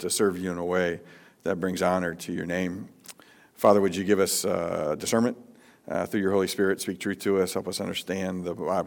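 A brief crackle rides on the loud peaks from 3.65 to 3.71 s, a short rough edge lasting about 70 ms rather than a sustained fuzz. This is hard clipping: the signal there runs about 2 dB beyond what a stage in the chain can pass, so the tops of the waveform are sliced flat. Those squared-off peaks add harmonics high in the spectrum, which is what gives the moment its brittle, crackly bite.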